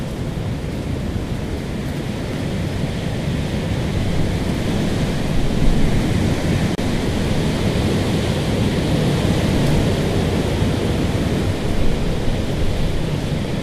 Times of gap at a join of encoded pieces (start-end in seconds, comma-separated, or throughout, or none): 6.75-6.78